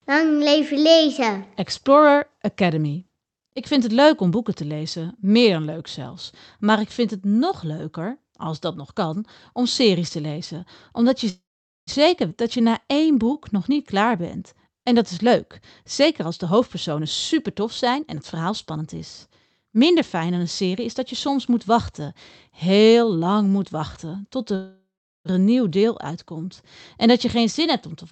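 At 8.76 s, right after "nog leuker als dat", the speech and the background noise drop together by about 4 dB in a single step, and the lower level holds until about 8.93 s, before "kan om series te". This is a sudden gain jump. Its likely cause is a digital gain change applied from one sample to the next with no ramp, so both the speech and the noise floor move at once.

From 11.29 to 11.90 s the sound stalls. The last fragment trails off into a fading buzz, and about 0.46 s of that is silent before the speech resumes exactly where it stopped. The same call audio freeze returns from 24.55 to 25.28 s, where the fill lasts about 0.70 s and includes about 0.39 s of silence. Here packets were likely held up in transit and the jitter buffer ran dry. The receiver stretched the last sound while it waited, so a gap is inserted and nothing is lost. Each freeze adds roughly as much delay as its own length.

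At 12.29–12.34 s the audio jumps forward through a joint of only about 13 ms. Roughly a fifth of a second of speech is missing, and the two sides are spliced almost directly. This is a skip ahead: a stretch of audio was dropped while later audio was already queued, which cut the accumulated delay by around 150 ms.

Straight after, from 12.44 to 14.92 s, the speech plays at about 94% speed with unchanged pitch. Sounds are drawn out, and a faint warble shows in places. This is a jitter buffer slow-down. Running low, the buffer repeated single pitch periods and bits of pauses many times in a row, adding about 166 ms in total to build a reserve.

Three stretches then sound hurried at normal pitch. From 16.01 to 18.95 s the speech runs at about 114% speed. From 19.65 to 21.31 s, ending just before "moet wachten", it runs at about 108%. From 27.36 to 28.06 s, after "dat je", it runs at about 106%. 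Each is a jitter buffer speed-up. The buffer held more audio than it aimed for, so it cut short slices of one or a few pitch periods again and again. Roughly 0.4 s, 0.15 s and 50 ms are removed in turn.

Across the whole clip the sound carries the coding noise of Opus at 48 kbps, with the top end limited to 8 kHz.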